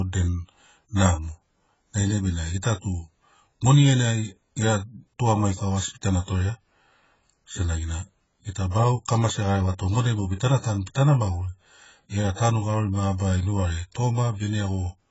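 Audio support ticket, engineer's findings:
Speech dull and smeared throughout, with a warbling, fizzy edge on sibilants. Nothing above 7.7 kHz. Likely AAC compression, AAC-LC, damage fitting a 16 kbps stream. Encoder dropped its cut-off and quantised coarsely.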